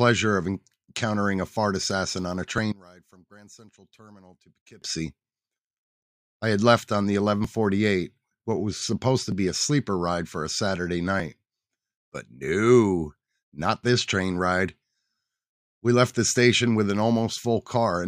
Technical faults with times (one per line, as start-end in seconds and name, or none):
2.72-4.82 one channel inverted